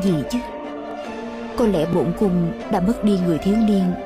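Overlapping chunks occur at 0.91–0.93 s, 1.93–1.95 s and 2.95–2.97 s, each producing a brief click or stutter in the audio. The sound was handled in blocks of about 1.0 s, and each new block begins 20 ms before the previous one finished, so those 20 ms play twice at every join. Because the blocks are evenly sized, the glitches recur at a steady one-second rhythm.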